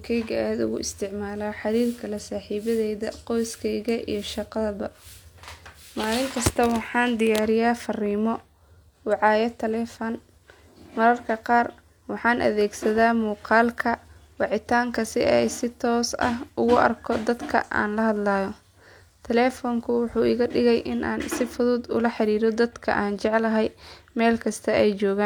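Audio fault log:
No faults heard anywhere in this speech recording.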